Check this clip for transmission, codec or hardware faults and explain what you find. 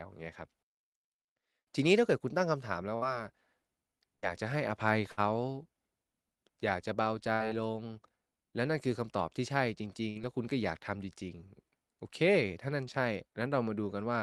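There's one kind of fault here: five short bursts of packet loss in a speech clip carried over a call link, with the top end rolled off around 12 kHz in a way that fits Opus at a modest bitrate.

Burst of packet loss, at 2.95–3.05 s, 4.16–4.30 s, 5.12–5.20 s, 7.33–7.43 s and 10.10–10.18 s. Each time, about 60 ms of audio never arrived in time, so the receiver stretched the last bit of sound for roughly 60 to 70 ms while fading it down. You hear a brief held buzz or fading hiss, then the speech jumps ahead with a small chunk missing.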